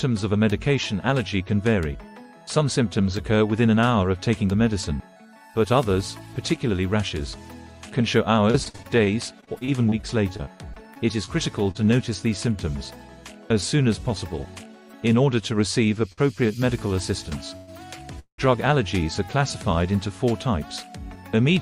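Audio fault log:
8.51–11.77 s, repeated packet loss (robotic sound): over 21 short gaps, none longer than 42 ms, the last sound keeps being extended to cover missing packets, about 0.32 s lost in total. The quick succession of patches makes it choppy, unlike a single stall where nothing goes missing.
16.13 s, short stall from a late packet: one packet came late and the jitter buffer ran dry, so the last sound was held about 49 ms and then resumed from the same point. Nothing is lost; it is a single brief hold, not a run of gaps.
17.57–17.69 s and 18.19–18.40 s, call audio freeze: playback halts and the last sound trails on as a fading buzz or hiss, 107 ms and then 187 ms, the second ending in about 90 ms of silence, most likely packets held up in transit. The audio resumes where it stopped, longer than a stall, with no loss.
21.16–21.49 s, jitter buffer speed-up: with excess audio queued, the receiver cut out short pitch-period slices, roughly 50 ms in all, so playback runs at 112% speed while pitch is unchanged. 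It sounds hurried rather than broken, distinct from gaps or holds.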